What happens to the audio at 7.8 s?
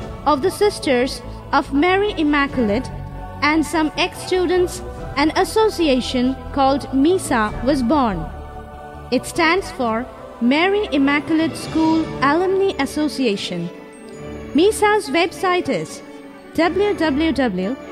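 Nothing goes wrong at 7.8 s; the audio continues intact through that moment, with no dropout, click or other fault.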